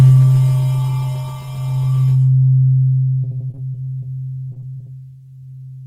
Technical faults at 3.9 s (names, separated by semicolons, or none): repeated packet loss (robotic sound)